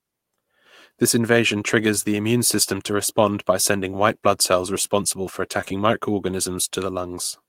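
A speech recording with a brief smeared wobble near 5.6 s, where a short consonant can blur or drop out. It is short concealed packet loss, three back-to-back gaps at 5.61 to 5.64 s, 5.64 to 5.68 s and 5.68 to 5.72 s. About 20 ms of audio went missing each time, which points to 20 ms packets. The receiver extended the preceding sound for roughly 10 to 20 ms per gap, then blended back into the real signal.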